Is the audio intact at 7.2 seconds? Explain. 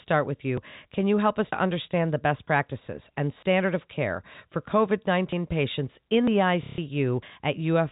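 No. At 7.22 s about 50 ms of speech skips, likely audio missing between 1-second chunks; the waveform shows an abrupt splice.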